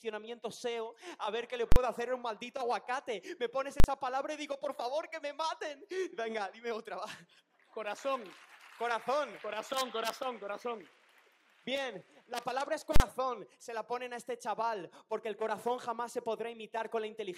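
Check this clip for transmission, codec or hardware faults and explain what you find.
Three loud bangs at 1.72, 3.80 and 12.96 s, each about 40 ms long, come from invalid numbers at full scale: a calculation produced invalid values that pinned the output at one extreme value.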